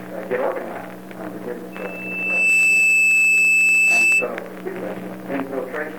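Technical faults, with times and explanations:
1.72–4.30 s, loudspeaker feedback squeal: a single piercing tone near 2.6 kHz rises out of the audio, swelling over roughly three quarters of a second into a steady shriek that ends up about 15 dB above the rest of the sound before it stops at 4.30 s. The microphone was hearing the loudspeaker it drives, and at that frequency the loop gain passed one, so the tone kept feeding itself.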